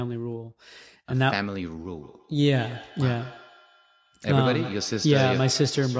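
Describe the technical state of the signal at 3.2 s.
At 3.2 s the signal is inside a feedback echo between two devices, which runs from 1.9 s to the end of the clip. A second device in the same room plays the call back, the first microphone picks it up again, and its echo canceller cannot remove sound it did not play itself. The speech returns roughly every 150 ms, thinner and more ringing with each pass, at up to about 16 dB below the direct speech. Unlike room reverberation, these are distinct repeats at a fixed spacing, not a smooth decaying tail.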